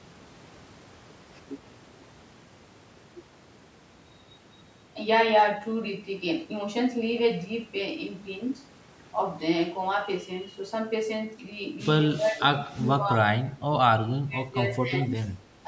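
Speech recording whose level drops by up to about 20 dB at 12.18–12.4, 12.59–12.88, 13.04–13.64, 13.92–15.11 and 15.4–15.45 s, likely speech suppressed in double talk by an echo canceller.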